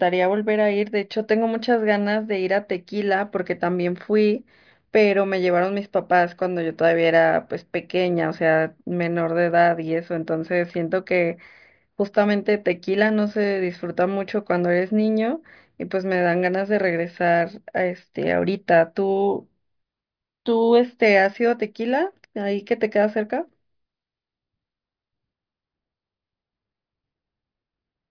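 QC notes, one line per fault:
No faults to note.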